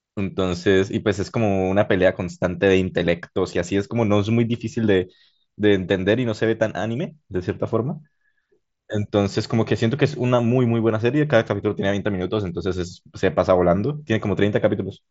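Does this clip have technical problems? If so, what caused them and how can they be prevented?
No, there are no technical faults to trace or prevent: the speech carries the band-limit of a Bluetooth mSBC headset link, with nothing above about 7.7 kHz and the light graininess that codec leaves on louder passages, and that is normal behaviour for the path.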